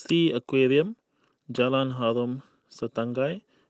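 No faults heard in the speech; the top end stops at about 8 kHz, which fits the normal band limit of a call codec on this path.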